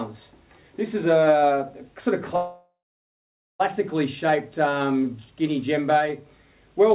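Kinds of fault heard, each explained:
Call audio freeze: from 2.36 to 3.62 s the sound stalls, a short fading buzz then silence, likely packets held up so the jitter buffer ran dry.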